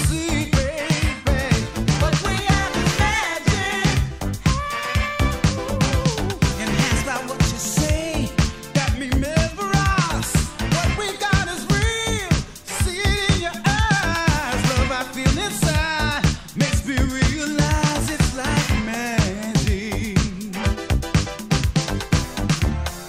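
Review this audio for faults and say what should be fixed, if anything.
Nothing here needs fixing, as no faults turned up anywhere in the recording.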